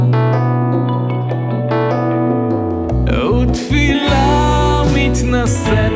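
No technical faults are audible anywhere in the recording.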